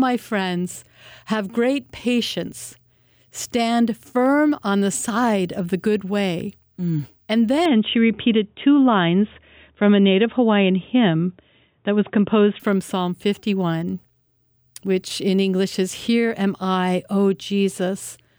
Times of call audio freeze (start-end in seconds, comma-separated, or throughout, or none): none